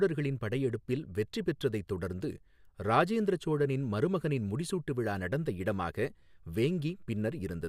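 A speech recording with nothing technically wrong to point to at any moment.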